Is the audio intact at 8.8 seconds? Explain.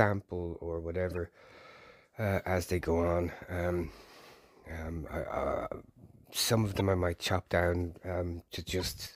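No. From 8.80 to 8.82 s a brief chirp-like blip, peaking around -30 dBFS, cuts across the sound. It is a corrupt frame decoded: bit errors damaged a couple of compressed frames, and the decoder played them anyway, putting energy at the wrong frequencies.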